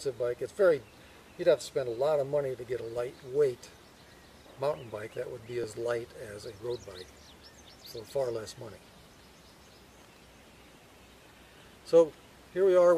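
At 5.64 s, an overlap between stream segments drops about 2 ms where two segments join, so the waveform jumps ahead abruptly, a tiny skip rather than a silent dropout gap.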